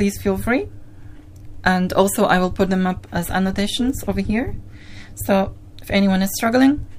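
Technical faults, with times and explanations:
3.48 to 5.22 s, overlap-add ripple: the sound takes on a metallic buzz, with extra tones around each note. The level swings by about 6 dB, over and over, at around 200 Hz. The audio was split into short windowed frames and joined again. The overlapping windows did not add up to a steady gain. So the level peaks and dips once per frame, and that frame rate is the buzz you hear.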